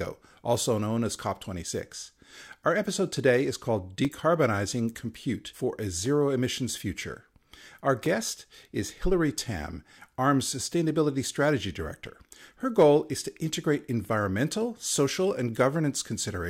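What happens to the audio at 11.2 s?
Periodic USB or driver dropouts run from 0.05 to 16.04 s, with a roughly 2 ms silent gap every 2.0 s heard as a tick during speech. On a waveform each one shows as a flat notch, and on a spectrogram as a thin vertical broadband line.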